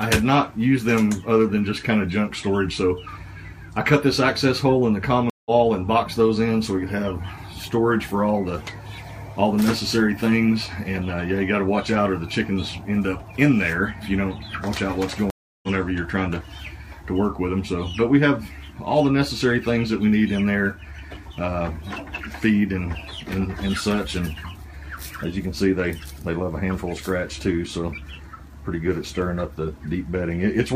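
Twice the connection dropped and the player reconnected, starting a new decoder partway through the stream: a stream reconnect at 5.30–5.51 s and again at 15.30–15.69 s. Each time the sound cuts to silence, for 0.16 s and then 0.33 s, and picks up further along than where it stopped, roughly 150 ms ahead the first time and about 300 ms the second, so a short stretch of material simply goes missing.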